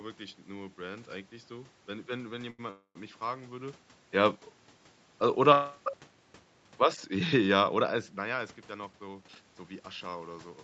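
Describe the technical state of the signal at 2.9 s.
A call audio freeze runs from 2.71 to 2.97 s, likely from delayed packets draining the jitter buffer. About 250 ms is filled in: the last sound is stretched into a fading buzz or hiss with roughly 80 ms of silence, then speech resumes intact at "mich fragen würde ja".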